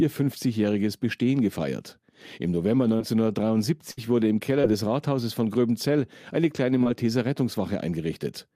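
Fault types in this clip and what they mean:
Short concealed packet loss: About 20 ms of the speech arrived too late at 2.97 s, 4.61 s after "wurde im", and 6.84 s after "eine kleine". Each hole was patched by extending the preceding sound, then blending back, leaving a brief smear or wobble.
Burst of packet loss: From 3.91 to 3.99 s, just before "wurde im", about 60 ms went missing in one run. The receiver held the last sound and let it fade, so a short buzz or hiss replaces that stretch before the speech resumes.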